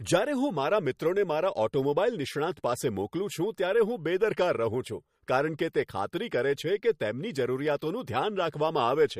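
Throughout, the speech sounds watery and swirly with nothing above 15.2 kHz, likely MP3 compression, which fits a bitrate near 48 kbps.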